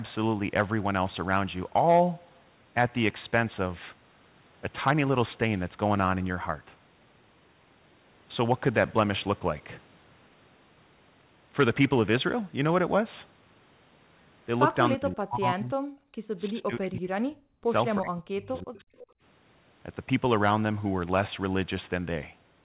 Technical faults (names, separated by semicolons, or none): speech suppressed in double talk; background gated by the echo canceller; echo leak